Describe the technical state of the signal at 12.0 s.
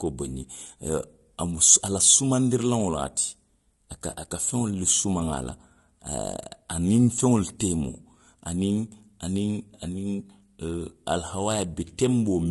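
At 12.0 s the speech carries low-delay AAC compression, present across the whole clip. It sounds rough and grainy, with noise between the harmonics. The likely cause is AAC-ELD coding, whose short frames resolve pitch poorly. The damage fits about 32 kbps.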